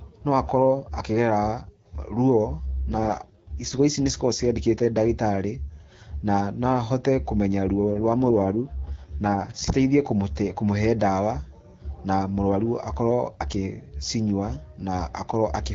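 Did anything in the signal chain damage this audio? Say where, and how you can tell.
Yes, twice, at the network and codec stage. The radio link forced an AMR rate drop: link adaptation cut the AMR-WB codec's speech bit budget and spent the freed bits on error protection. Between 2.69 and 3.81 s, just before "ici nĩ", and again from 7.90 to 9.73 s, leading into "kũmũte kũmũhe ndawa", the speech turns rough, raspy and synthetic. The bandwidth stays the same and there is no gap. That fits a step down from 12.65 to 6.6 kbit/s, and the cleaner wideband sound returns as the rate recovers.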